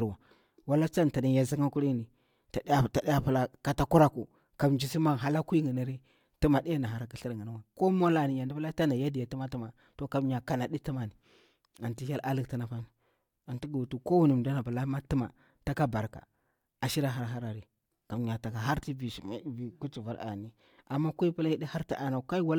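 Nothing in the speech stood out as a technical fault on listening.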